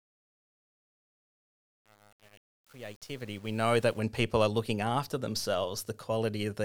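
Speech fades in from the start, and the fade is spoiled by truncation distortion on a fade. From 0.0 to 3.99 s the level rises. But the quiet part is gritty, worst from 0.0 to 3.91 s. Low-level detail collapses into coarse square steps. The fade stage kept too few bits and added no dither. The graininess fits an 8-bit path.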